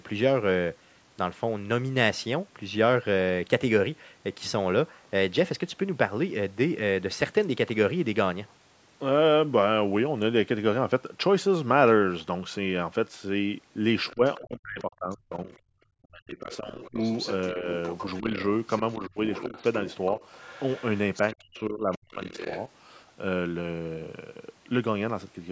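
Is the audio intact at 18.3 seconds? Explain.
No. From 16.52 to 22.63 s, other side's voice leaking through, likely from incomplete echo cancellation, puts a second voice about 15 dB under the speech. From 18.2 to 18.3 s, speech is suppressed in double talk: with both sides active, the canceller likely pulled everything down, dipping the talker roughly 10 dB.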